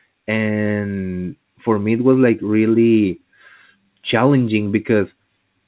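Nothing's wrong with this speech recording: it's just come through an ordinary call path, and the way everything above about 4 kHz is missing fits a telephone-band G.711 mu-law link at 64 kbps.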